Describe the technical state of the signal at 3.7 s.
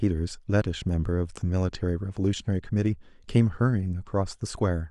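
At 3.7 s the signal is intact, with no technical fault audible at that moment.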